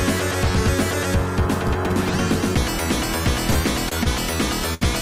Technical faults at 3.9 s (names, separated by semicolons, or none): short stall from a late packet